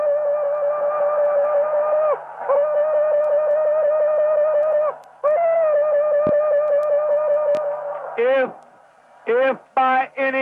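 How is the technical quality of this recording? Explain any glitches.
Two loud pops break the recording, at 6.27 to 6.31 s and again at 7.55 to 7.59 s. The first peaks about 15 dB above the sound and the second about 5 dB. Each is most likely a sudden voltage pulse, such as a switch or static discharge, with the audio continuing underneath. On a waveform each shows as a sharp spike, and on a spectrogram as a thin vertical broadband stripe.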